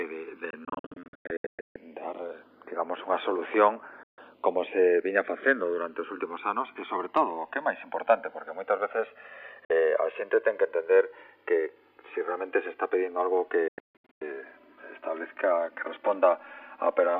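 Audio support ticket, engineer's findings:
Channels drifting apart: left and right sources apparently running on separate clocks, mismatched by a few hundred ppm. Inter-channel delay creeps up to around 4 ms by the end. Mono sum gives comb notches sweeping slowly, audible as slow flanging throughout.

Digital broadcast dropout: receiver losing sync or rejecting corrupted frames and muting until clean frames return. Four events. 0.50–1.76 s: about 744 ms lost in scattered holes, longest 144 ms. 4.03–4.18 s: one 144 ms gap. 9.65–9.70 s: 48 ms. 13.68–14.22 s: about 432 ms lost in scattered holes, longest 144 ms. Abrupt 3 ms fades to silence. Hole lengths fit roughly 24 ms frames. Lost material is not recoverable.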